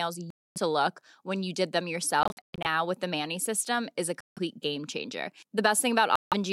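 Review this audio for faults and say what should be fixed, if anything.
The speech falls silent four times: 0.30 to 0.58 s, just before "to look when you"; 2.23 to 2.66 s, between "when you did them" and "with the", as scattered gaps totalling about 255 ms, the longest 116 ms; 4.21 to 4.39 s, after "system is a"; and 6.16 to 6.34 s. The holes have abrupt edges or a fade of a few milliseconds, and the audio resumes as if it had kept playing. This is a likely Bluetooth dropout: packets reached the headphones too late and were discarded. To prevent it, keep the source near the headphones and clear of 2.4 GHz interference, or use a wired connection.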